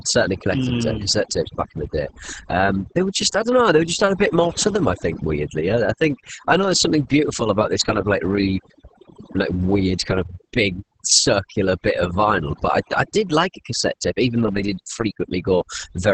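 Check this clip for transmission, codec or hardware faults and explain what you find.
Two faults run through the whole speech clip: overdone noise removal and heavy Opus voice compression.

Overdone noise removal is present from start to finish. A noise reducer set far too aggressively pushes individual frequency bands down or shuts them off whenever their level sits near what it takes to be noise. The pauses drop to near silence dotted with twinkling specks, and softer parts of the voice are stripped out with the hiss. Unlike a codec, this leaves the top of the spectrum intact. What sets it apart is that the artefacts follow the signal level, flickering in the quiet gaps, rather than sitting in a fixed frequency range.

Opus voice compression is also present throughout. The audio has a hard ceiling at about 8.7 kHz, the wideband limit of the SILK linear-prediction coder. The coarse, hoarse texture fits a very low bitrate of around 10 kbps, where the excitation signal is coded only roughly in 20 ms frames. 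The speech comes out muffled and slightly robotic. Unlike the noise removal, this damage stays on the voice itself, including its loud parts, and is bounded by that fixed bandwidth cut-off.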